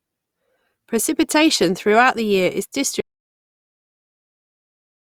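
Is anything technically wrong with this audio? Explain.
Yes. There is an audio dropout to silence. At 3.00 s the speech cuts off mid-flow. It never returns. The last 2.1 s of the clip are completely silent, with no room tone at all. That flat silence is the tell. The input was likely lost through a disconnected device, a failed link or a mute, while the recorder kept writing silence. Whatever was said after that point is gone.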